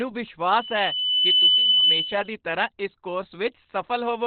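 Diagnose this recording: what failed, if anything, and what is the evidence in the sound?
The codec stage failed: the speech was most likely squeezed through Opus compression at a very low rate, fitting roughly 12 kbps in its SILK speech mode. Throughout, nothing survives above about 4.4 kHz, so the narrowband voice sounds muffled and hoarse, with heavy codec damage.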